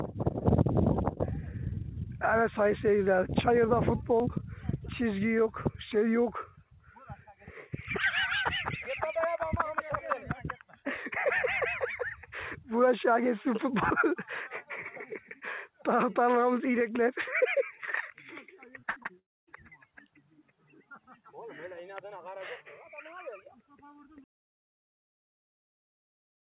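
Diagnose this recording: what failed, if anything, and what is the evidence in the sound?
Repeated packet loss (robotic sound) at the network stage, from 18.8 to 19.11 s: five short holes, the longest 56 ms, patched by repeating the preceding sound, so over 40% of that span turns choppy. Separate brief gaps, rather than one long silence, distinguish it from a dropout.

Long network dropout, likely, from 19.19 to 19.49 s: the sound stretches into a fading buzz, then goes quiet for about 240 ms before returning with roughly 280 ms missing. One continuous gap, heard through the 4 kHz-limited call band, distinguishes it from the preceding stutter.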